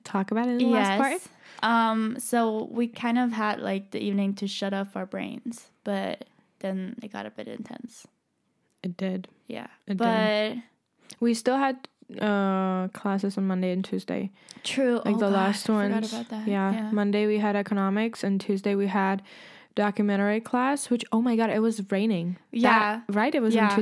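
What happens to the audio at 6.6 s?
Nothing goes wrong at 6.6 s; the speech there plays through cleanly, with no dropout, glitch or distortion.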